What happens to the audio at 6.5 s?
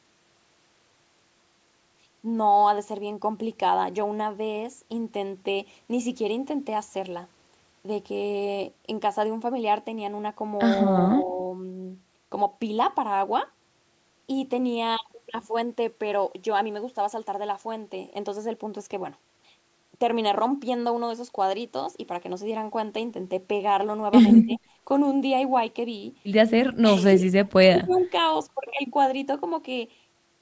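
Nothing goes wrong at 6.5 s: the speech carries on intact, with only the ordinary character of call microphone processing, which trims the lowest bass and leaves nothing above 8 kHz.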